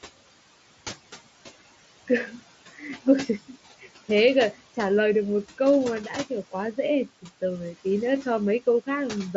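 Noise suppressor artifacts run throughout this speech: the background floor drops about 16 dB between phrases and swells under speech, visible on a spectrogram as pumping, patchy noise bands. The room noise sits about 17 dB below speech, and the mSBC headset path leaves nothing above 7.7 kHz.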